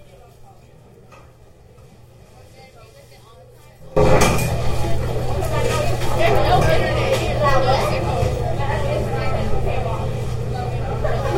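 From the start to 3.97 s the sound is heard through what is likely one channel inverted: with one stereo side's polarity reversed, the material shared by both channels cancels when they are combined to mono. The level falls by about 24 dB, and what survives is a faint remainder of the inter-channel differences. On a waveform this stretch is a much smaller envelope; a spectrogram shows it dim.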